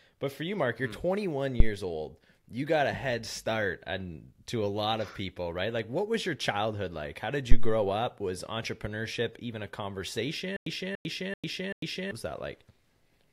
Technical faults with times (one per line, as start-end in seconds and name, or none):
1.60-1.74 phantom power thump
7.51-7.81 phantom power thump
10.56-12.11 stutter with silent gaps